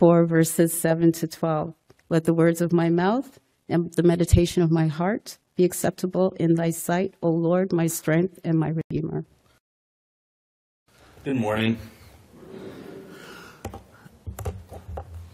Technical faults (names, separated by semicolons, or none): corrupt frame muted